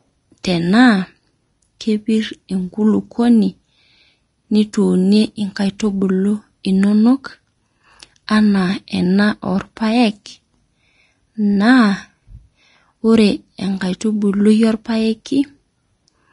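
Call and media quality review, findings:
Vorbis compression, throughout: hissy, grainy treble, nothing above 10.6 kHz, clearly audible; likely a low-quality Vorbis encode, which fits roughly 33 kbps, with the coarsely quantised upper band turning into noise.

Pre-echo at 0.43 s and 5.79 s: about 10 ms of hiss ahead of sharp speech onsets, where the transform block spreads quantisation noise into the quiet before each attack.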